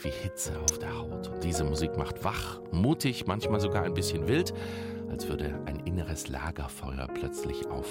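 At 0.68 s a single sharp snap of about -10 dBFS sits on top of the audio, an electrical switching spike likely from a nearby switch arcing.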